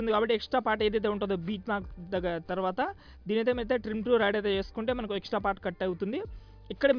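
Nothing stood out as a technical problem on listening to this audio.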